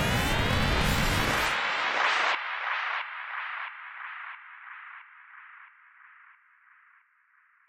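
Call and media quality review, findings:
No faults found in the signal path; audio reaches the output with no dropouts, clipping, timing faults or level problems detected.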